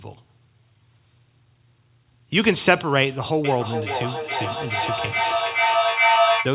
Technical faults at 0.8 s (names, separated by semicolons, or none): none